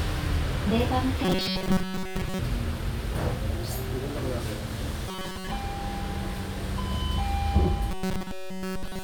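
From 1.25 to 2.39 s, 5.08 to 5.51 s and 7.91 s to the end, the sound turns into a rigid, metallic buzz near 188 Hz. This is robotic sound from repeated short buffers, likely from replaying a roughly 5 ms slice in place of most of the audio, and all of it in the last stretch.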